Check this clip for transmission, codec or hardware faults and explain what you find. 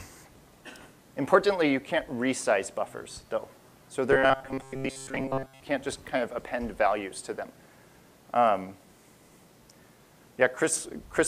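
One fault stands out: robotic sound from repeated short buffers, from 4.12 to 5.61 s. A rigid, metallic buzz near 134 Hz replaces most of the sound. The likely cause is audio arriving too late, so a roughly 7.5 ms buffer was repeated.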